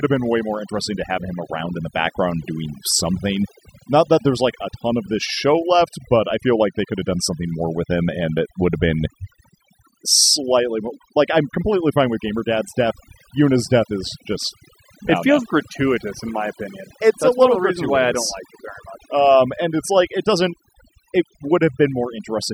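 Overdone noise removal runs through the whole speech clip. A noise reducer set far too hard is pulling individual frequency bands down or out wherever they sit close to its noise estimate, taking the quieter parts of the voice with them. The gaps fall to near silence dotted with twinkling specks. Unlike a noise gate, which mutes everything at once, this strips the quieter parts of the voice band by band even while it is speaking.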